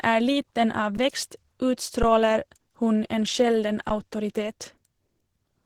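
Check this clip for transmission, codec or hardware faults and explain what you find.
Two faults are audible: codec damage throughout and two brief dropouts.

Throughout, the speech sounds muffled and hoarse, most likely from Opus compression in its hybrid speech mode at a low rate, around 16 kbps.

At 0.97 s, right after "liten av", and again at 3.89 s, the sound freezes for about 11 ms with barely a click. These are underruns with a held sample: the output buffer emptied and the converter held its last value until playback resumed where it stopped. The gap length fits a 512-sample buffer.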